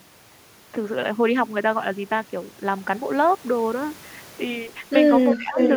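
From 5.3 to 5.37 s a faint delayed copy of the speech appears, roughly 20 dB below it and trailing by 368 ms. This is an echo leak, likely from a far-end loudspeaker whose echo canceller let part of the microphone pickup return down the line. From 5.37 to 5.57 s the speech dips by around 15 dB for about 200 ms. This is speech suppressed in double talk, likely because an echo canceller unable to separate the talker from the loudspeaker echo attenuated both together. From 5.57 to 5.71 s the echo leak returns, again 368 ms behind, but now about as loud as the speech itself, so the delayed copy sits on top of the speech rather than under it.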